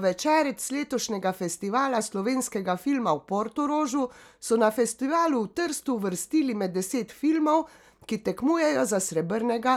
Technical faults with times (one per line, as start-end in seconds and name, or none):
none